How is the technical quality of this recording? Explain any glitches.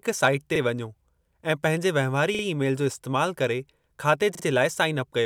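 The speech is marred by three repeated-buffer stutters. At 0.56 s one piece of about 43 ms plays an extra time, and at 2.35 s and 4.35 s the same piece plays two extra times. The length fits a 2048-sample buffer. When fresh audio arrived late, the device replayed its last block, creating a brief stammer with hard joins. In a waveform, identical segments repeat back to back. In a spectrogram, each join shows a thin vertical broadband line.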